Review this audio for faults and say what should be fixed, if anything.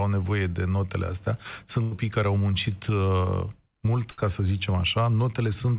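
Burst of packet loss at 1.82–1.93 s, after "nevoie de notele astea", and at 4.11–4.19 s, before "să zicem". Each time the last sound is held and faded, not silence as in a plain dropout, and about 100 ms and 60 ms of audio are skipped. Forward error correction or more jitter-buffer headroom would prevent this.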